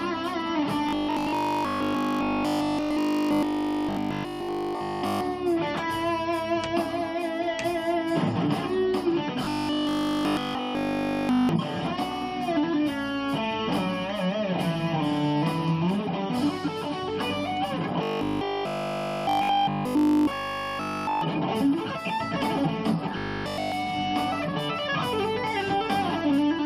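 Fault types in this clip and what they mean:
Robotic sound from repeated short buffers: at 0.89–5.21 s, 9.45–11.49 s, 18.03–21.21 s and 23.18–23.72 s the sound becomes a rigid, metallic 50 Hz buzz. It is likely that audio arrived too slowly and a 20 ms chunk was replayed in place of almost all of the real signal. The waveform shows one identical 20 ms shape tiled end to end. The spectrogram shows steady, evenly spaced horizontal lines at multiples of 50 Hz.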